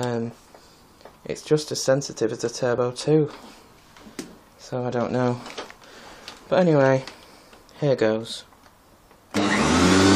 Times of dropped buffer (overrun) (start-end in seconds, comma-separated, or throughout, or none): 2.78, 4.92